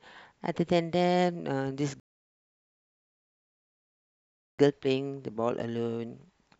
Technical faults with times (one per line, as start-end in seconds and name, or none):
2.00-4.59 rebuffering stall